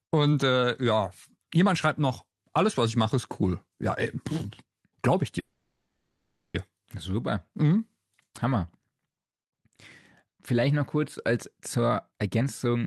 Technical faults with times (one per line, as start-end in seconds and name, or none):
5.39-6.56 call audio freeze
11.78-12.86 jitter buffer speed-up